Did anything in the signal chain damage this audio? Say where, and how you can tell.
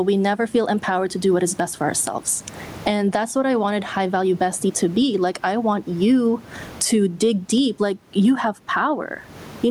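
Yes. Gain pumping runs throughout: the gain swings around 20 dB under each loud syllable, with room noise about 36 dB below the speech, likely from excessive input gain feeding a fast limiter.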